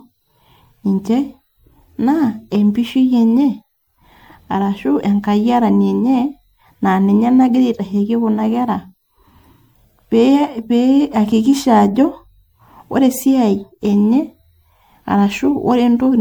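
Across the whole speech clip, generation loss gives a swirly, hollow, smeared tone with blurred consonant attacks, likely from roughly seven rounds of MP3 re-encoding, consistent with 96 kbit/s. A spectrogram shows accumulating holes and smearing below a 20.1 kHz ceiling.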